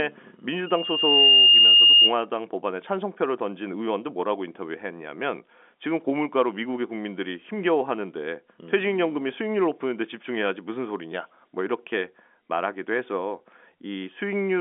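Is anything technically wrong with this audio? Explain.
Yes. From 0.66 to 2.15 s there is loudspeaker feedback squeal. A microphone is picking up its own loudspeaker, and the loop gain tops unity at 2.8 kHz. That tone swells over roughly 0.7 s to about 10 dB above the speech. Unlike a steady interfering whistle, it grows from nothing before it stops.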